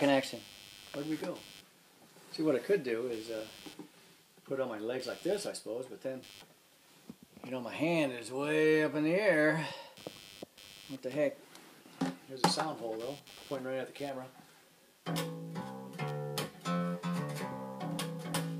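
From start to finish the sound carries computer activity noise: a buzzy, pulsing layer repeating at roughly a hundred times per second and sitting around 25 dB below the wanted signal. It rises and falls with what the computer is doing rather than with the audio itself. Shifting load from the processor, graphics hardware or mouse is disturbing the ground reference that the audio circuitry shares, and that fluctuating ground is heard directly as chirping buzz.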